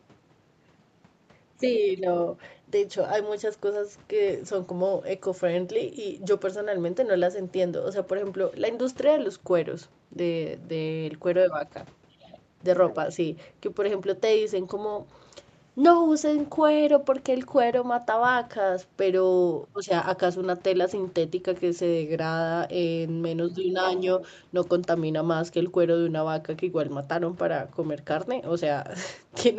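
Nothing stood out on listening to the speech, which carries the band limit near 8 kHz expected from the call's microphone processing and Opus codec.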